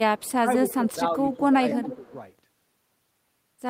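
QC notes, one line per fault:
0.18–0.32 s, echo leak: a faint delayed copy of the speech, about 30 dB down, trails 250 ms behind, likely from a far-end canceller letting loudspeaker pickup through.
0.41–1.61 s, speech suppressed in double talk: the talker dips by up to about 10 dB in patches totalling around 0.4 s, likely the canceller ducking everything while both sides overlap.
0.70–0.91 s, echo leak: the 250 ms delayed copy comes back much stronger, about 15 dB under the speech, likely residual loudspeaker echo slipping past cancellation.
1.33 s, echo leak: a brief scrap of the same 250 ms echo, about 20 dB down, pops through, likely a short lapse in the echo canceller.
1.70–2.13 s, echo leak: the loudest echo, only about 10 dB below the speech, lagging by roughly 260 ms, likely the canceller losing track of the loudspeaker path.
1.82–2.12 s, speech suppressed in double talk: a shallower dip of about 5 dB over roughly 0.2 s, likely the canceller turning down the talker along with the echo during overlap.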